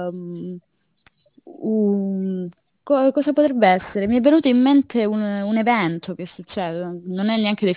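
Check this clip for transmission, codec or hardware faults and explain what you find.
Aliasing runs through the whole recording. The speech appears to have been resampled from a much higher rate down to something that fits 8 kHz, without a low-pass filter first. Energy above the 4 kHz folding point was mirrored back into the band at unrelated frequencies, sitting roughly 25 dB below the speech. Sibilants sound gritty and metallic rather than airy, and the spectrum stays dense right up to 4 kHz instead of rolling off.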